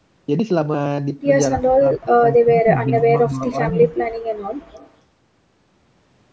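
Speech clip. An echo canceller likely could not tell this talker from the far side during double talk, producing speech suppressed in double talk. Between 1.53 and 3.53 s, the voice drops in pieces for about one and a half seconds in total, by up to about 35 dB, with a slighter, brief dip between 3.70 and 3.92 s. An echo leak follows, where a loudspeaker echo likely escaped cancellation and was sent back: from 4.71 to 4.91 s, a faint copy of the voice returns 247 ms late, about 25 dB below the speech.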